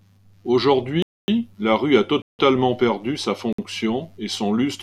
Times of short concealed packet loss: none

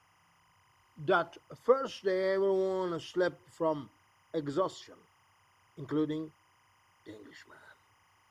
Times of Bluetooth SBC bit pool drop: none

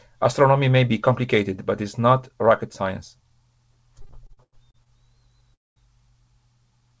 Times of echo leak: none

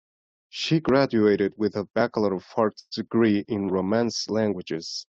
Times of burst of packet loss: 2.79-2.93

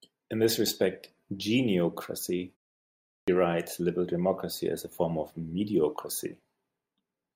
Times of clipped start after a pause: 3.22-3.28

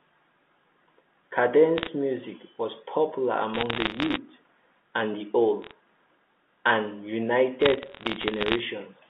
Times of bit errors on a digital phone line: 1.78-1.88, 3.54-4.17, 5.62-5.72, 7.60-8.59

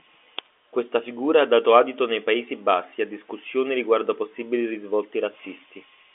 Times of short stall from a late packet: none

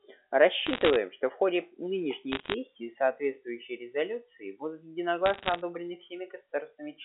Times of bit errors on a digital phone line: 0.67-0.96, 2.32-2.54, 5.26-5.61

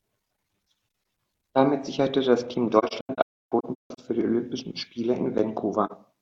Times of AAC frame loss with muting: 2.78-4.00, 5.86-5.92

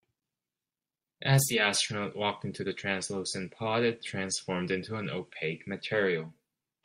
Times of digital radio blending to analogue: 1.36-6.48

